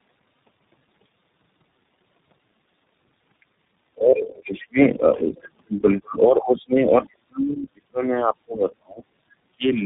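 The call passed through several links that each decode and re-encode the speech with their own codec, which is tandem speech coding. The sound fits three low-rate speech coders in a row, with a final iLBC stage, each one compressing the previous one's damage. Across the whole recording the speech is rough and muffled, with a warbly, smeared texture, and nothing is present above 3.8 kHz.

From 3.92 to 4.78 s, and again from 6.01 to 9.02 s, the speech drops sharply, at its deepest by around 35 dB. The likely cause is speech suppressed in double talk: with both sides talking at once, the echo canceller could not tell this talker from loudspeaker echo and attenuated the line. The first dip is short. The second runs for about three seconds.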